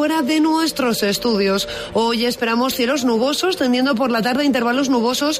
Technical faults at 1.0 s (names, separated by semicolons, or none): none